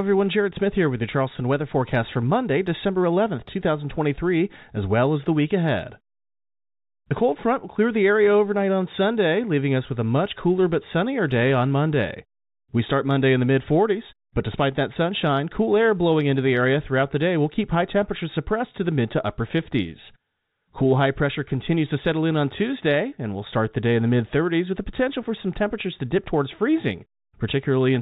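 No technical faults can be heard in this speech.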